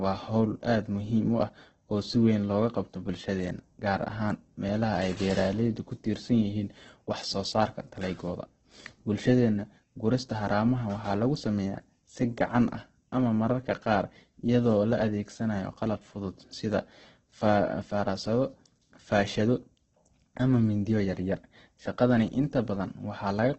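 A speech recording, degraded throughout by Opus compression. Nothing sounds above about 8.2 kHz. Voiced sounds come out noisy, rough and grainy rather than swirly. This is likely Opus in its music mode, starved of bits at a very low bitrate, around 12 kbps.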